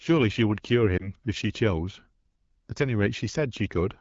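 A brief dip and warble in the speech runs from 0.97 to 1.12 s. This is a lost AMR speech frame: one 20 ms frame failed its check, and the AMR-WB decoder filled the gap by reusing the previous pitch and vocal tract settings at lowered gain before recovering.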